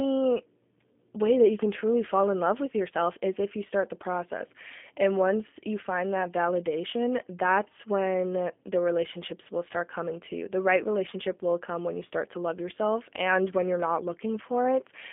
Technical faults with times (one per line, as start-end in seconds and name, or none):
0.00-15.12 G.729 codec